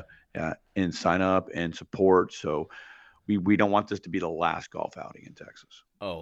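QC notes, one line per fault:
No fault found in the clip.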